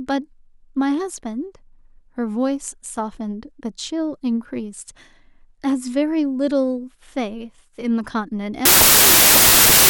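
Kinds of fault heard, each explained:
Wrong sample width, 8.65 to 9.89 s: the last stretch of speech turns into loud, harsh noise with the original buried in it, running 1.33 times too fast and correspondingly higher in pitch. That ratio fits packed 24-bit data being read back as 32-bit samples, so each value is assembled from bytes belonging to neighbouring samples, and only some of them preserve the top bits of the real waveform.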